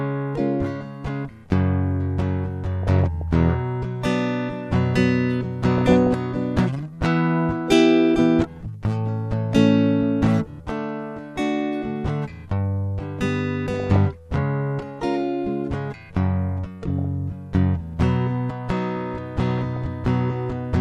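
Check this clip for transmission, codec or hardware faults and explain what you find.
The music is hit by one recurring transmission fault, DAB burbling, in five short bursts at 2.83–3.22 s, 5.78–6.07 s, 13.74–14.06 s, 16.82–17.05 s and 19.48–19.82 s. Bit errors in weak reception, which fit an error rate of a few tenths of a percent, slip past error correction and corrupt MP2 samples and scale factors, so individual sub-bands get noise blips or jump in level for up to a frame. The result is short blips of noise and level jumps in single sub-bands over the programme.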